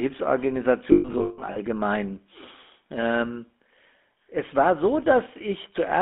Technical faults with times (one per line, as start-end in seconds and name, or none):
0.00-6.01 GSM full-rate codec
0.92-1.57 lost GSM frames